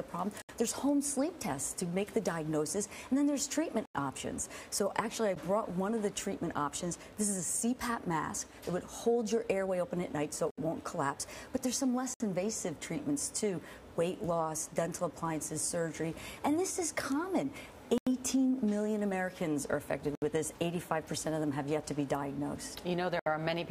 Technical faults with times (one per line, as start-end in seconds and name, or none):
0.42-0.49 block of digital silence
3.85-3.95 block of digital silence
5.35 block of digital silence
10.51-10.58 block of digital silence
12.14-12.20 block of digital silence
17.98-18.07 block of digital silence
20.15-20.22 block of digital silence
23.19-23.26 block of digital silence